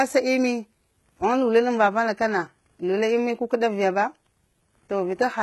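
Throughout the speech, the audio was likely squeezed through HE-AAC compression at a very low rate, consistent with about 16 kbps. Treble above the coded band is rebuilt rather than kept, so s sounds come out heavily gritty and metallic, with nothing above 11.8 kHz.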